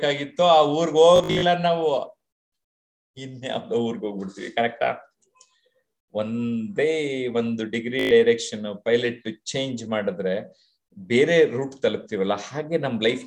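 Bluetooth stutter at 1.16 to 1.43 s: audio packets went missing or arrived late, and the receiver kept replaying its last buffered slice until fresh data turned up. About 187 ms is lost across some 260 ms, with the longest run near 56 ms, giving a broken machine-gun buzz before the sound jumps ahead. The same dropout recurs at 8.00 to 8.11 s, losing 112 ms in one shorter burst of repeats.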